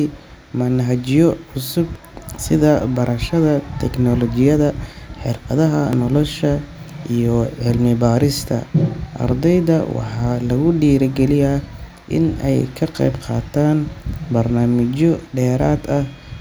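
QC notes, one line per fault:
1.95, 5.93, 9.91 and 13.89 s: audio missing between chunks. Each time a sliver of around 20 ms vanishes and the two sides butt straight together, giving a small skip roughly every 4 s. That's likely a chunked recorder dropping a bit at each handover.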